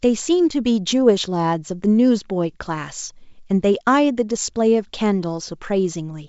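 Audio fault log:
Nothing stood out on listening to this speech clip.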